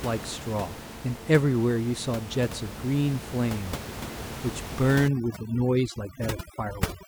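From 5.08 s to the end at 7.07 s, the background drops and breaks up into twinkling, chirpy specks, and the speech has its softer parts thinned away. This is overdone noise removal: a noise reduction stage set far too aggressively, pushing individual frequency bands down or off whenever they sit close to its noise estimate. Here the room noise sits about 10 dB below the speech, and quiet speech detail was cut along with it.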